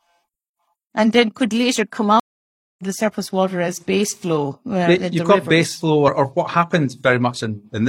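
At 2.20 s, just after "then could later come", the speech drops out in a stream reconnect: the connection failed, playback went silent, and a new decoder picked the stream up again mid-flow. The silence lasts about 0.59 s, and at 2.83 s the audio resumes with "the surface water as", roughly 0.4 s later in the stream, so a small stretch is simply missing. The waveform shows a flat gap with a soft onset, and the spectrogram shows a clean blank band.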